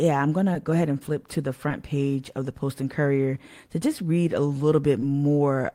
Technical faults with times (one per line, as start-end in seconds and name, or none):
0.53-0.56 short concealed packet loss
1.68-1.72 short concealed packet loss
5.00-5.04 short concealed packet loss